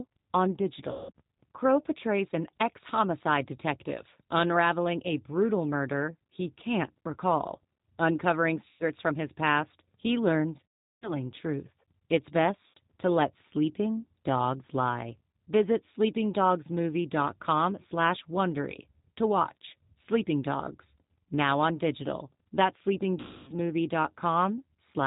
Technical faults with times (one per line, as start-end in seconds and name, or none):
0.00-25.06 G.729 codec
0.91-1.11 VoIP packet loss concealed by the speech codec
8.68-8.84 VoIP packet loss concealed by the speech codec
10.67-11.13 VoIP packet loss concealed by the speech codec
12.68-12.77 VoIP packet loss concealed by the speech codec
23.20-23.52 VoIP packet loss concealed by the speech codec